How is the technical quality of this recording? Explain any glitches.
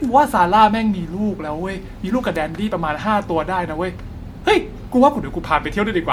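The recording has one fault, present for the whole clip: generation loss. Throughout the speech the sound is swirly and hollow, with smeared consonant attacks and a watery, phasey texture that a single encode at this quality would not produce. The likely cause is repeated lossy re-encoding, roughly five passes, with artefacts consistent with MP3 at around 96 kbit/s. Each pass quantises on a shifted frame grid, so noise and spectral holes accumulate. Content still reaches about 20.1 kHz, so the damage is smearing rather than band-limiting.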